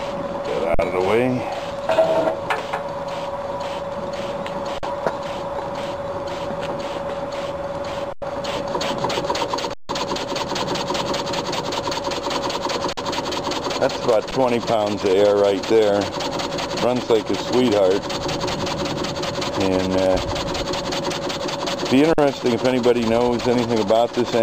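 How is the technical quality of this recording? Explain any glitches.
The recording is marred by seven brief dropouts where the sound freezes. They occur at 0.74–0.79 s, 4.78–4.83 s, 8.13–8.22 s, 9.74–9.89 s, 12.93–12.97 s, 14.31 s and 22.13–22.18 s. Most last about 46 ms. The one at 8.13 s lasts 93 ms, the one at 9.74 s lasts 157 ms, and the one at 14.31 s lasts 11 ms.

Each gap is an underrun with held sample. The output buffer ran dry, and the converter held its last value, so the waveform sits flat at a fixed level. The sound simply stops, with little or no click. No audio is lost across the gap, so playback resumes where it left off and the restart is soft rather than a sharp edge. The 46 ms gaps fit a 2048-sample buffer, and the 93 ms gap fits two of them.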